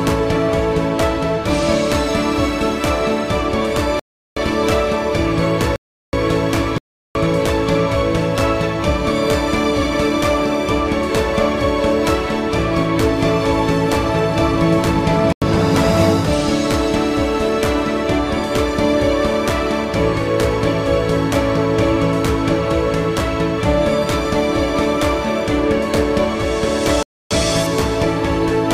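Blocks of digital silence hit at 3.99, 5.76, 6.78, 15.33 and 27.03 s. Likely unfilled output buffers cut the sound out and back with no fade, leaving short holes.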